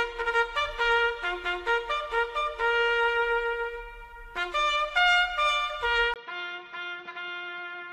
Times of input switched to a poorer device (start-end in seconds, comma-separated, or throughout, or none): 6.14-7.92